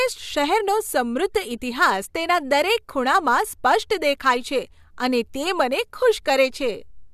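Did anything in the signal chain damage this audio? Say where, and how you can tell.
No, nothing audible in this speech recording points to damage at any stage of the signal chain.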